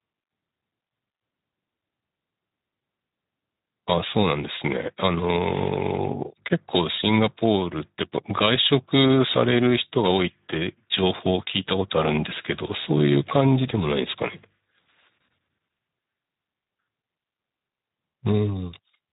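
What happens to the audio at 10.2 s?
At 10.2 s the speech is still passing through the Speex codec, which affects the whole clip rather than this moment alone. The encoder runs at a low setting, one that fits roughly 11 kbps, so too few bits are left to model the excitation signal behind each syllable. The result is plainly audible codec damage: the speech sounds hoarse and grainy, and nothing remains above 3.8 kHz, which leaves it narrow and muffled.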